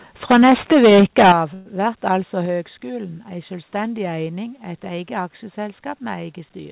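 From 0.3 to 1.32 s there's microphone overload. The input was likely set far too hot, driving peaks about 14 dB past the converter's ceiling, so roughly a fifth of the samples get their tops flattened. That gives a harsh, crackly edge on the loudest moments.

The microphone volume stepped down three times, at 0.32 s (about 2 dB), 1.32 s (about 11 dB) and 2.46 s (about 4 dB). It's likely the call software reacting to the clipping by cutting the input gain. You hear sudden drops in level, and the big one lands right as the overload stops.

At 1.54 to 1.68 s there's a call audio freeze. Packets were likely held up and the jitter buffer ran dry, so the last sound is stretched into a fading buzz or hiss for 116 ms. Then playback resumes where it stopped, so nothing is lost, just a short gap inserted. All of this sits on the narrowband call path, with nothing above 4 kHz, which fits G.711.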